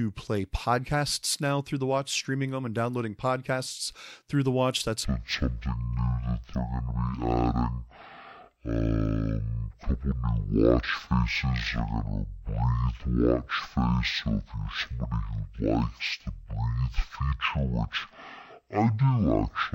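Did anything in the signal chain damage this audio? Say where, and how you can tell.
Yes. At sample-format conversion, stereo read as mono: from 5.05 s, before "I have mine set", speech drops to half speed, an octave lower. Interleaved channels play as one.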